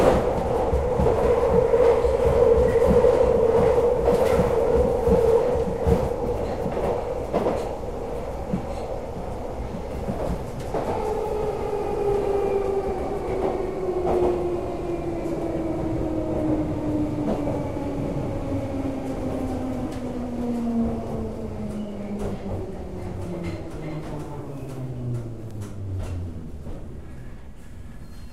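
Bit error spikes occur at 14.9 s and 25.51 s. Each time a single flipped bit throws a run of three samples far off their true value before snapping back, giving one sharp broadband tick unrelated to the sound, peaking at about -34 dBFS and about -28 dBFS.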